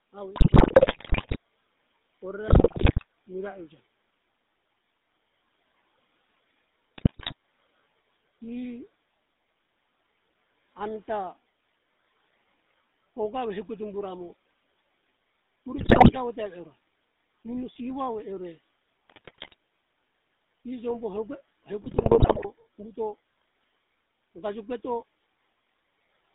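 Throughout, the speech carries the GSM full-rate codec sound: a band of roughly 200 Hz to 3.7 kHz, with a buzzy, gravelly roughness consistent with a 13 kbps full-rate coder. The codec rebuilds the voice from a vocal-tract filter driven by a coarse, regularly spaced pulse excitation. That leaves a steady grain over every voiced sound. Unlike plain band-limiting, the texture itself is rough, not just muffled.

GSM bit errors first strike from 0.36 to 1.37 s and again from 2.48 to 3.05 s, just before "mira euja". In both bursts the error rate is heavy, around a tenth of the bits. Corrupted filter, pitch and gain values make individual frames squawk, pop and gargle, with sudden level jumps. They are erratic and loud, unlike the even codec grain or a clean dropout.

From 4.73 to 4.95 s, the speech is cut by the noise suppressor for about 200 ms. The suppressor treats part of the speech as noise and pulls it down by about 14 dB along with the room noise, which sits about 24 dB below the speech. 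The passage sounds swallowed and faint, not distorted. That smooth loss of level tells it apart from the harsh bit-error bursts.

Further GSM bit errors follow at 6.98 to 7.34 s, at 15.78 to 16.17 s just before "te ve eora", at 19.08 to 19.55 s, and at 21.82 to 22.46 s. These later bursts are lighter than the first two, but they still bring the same gargling squawks and abrupt pops.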